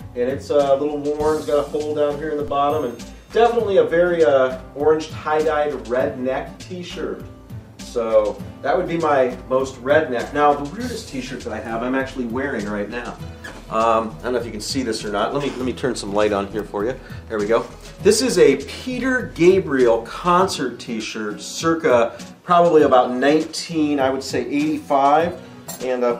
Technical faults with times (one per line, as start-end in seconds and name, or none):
2.48 DC step